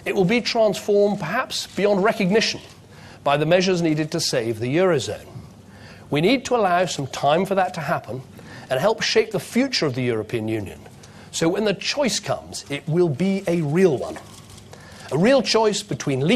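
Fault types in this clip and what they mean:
No audible faults found in the clip.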